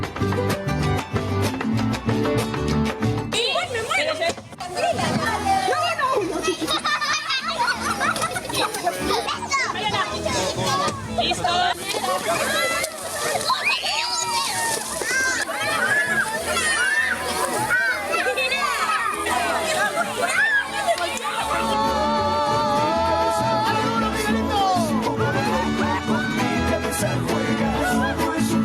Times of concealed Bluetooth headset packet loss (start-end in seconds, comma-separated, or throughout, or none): none